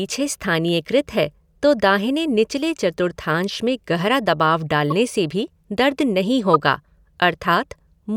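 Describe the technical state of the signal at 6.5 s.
At 6.54 to 6.56 s a corrupt frame decoded error strikes: damaged bits in a couple of compressed frames were played anyway, misplacing energy into a chirp, squeak, blip or burst of noise peaking around -5 dBFS. A spectrogram shows a brief vertical smear; the waveform shows a spike.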